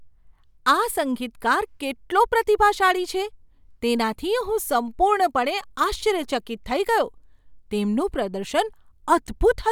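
No technical faults can be heard anywhere in the recording. Nothing in the speech needs a fault description.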